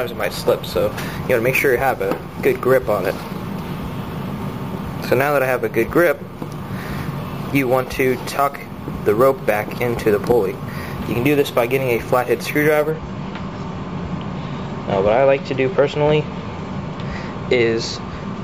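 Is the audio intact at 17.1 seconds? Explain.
Yes, the audio at 17.1 seconds is intact, with no dropout, click, distortion or other fault at that moment.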